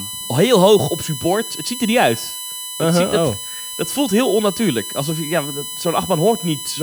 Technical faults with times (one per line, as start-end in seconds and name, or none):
0.00-6.83 USB whine